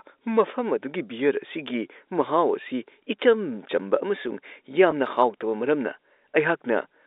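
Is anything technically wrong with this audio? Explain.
Yes. Packet loss with pitch repetition occurs at 4.91 s. About 10 ms of the speech went missing, consistent with one lost packet, and the receiver filled the gap by replaying the last pitch period. The gap is brief, so it sounds like a slightly held, buzzy moment rather than a dropout. The speech is carried over a G.711 telephone channel, band-limited to roughly 300 Hz to 3.7 kHz.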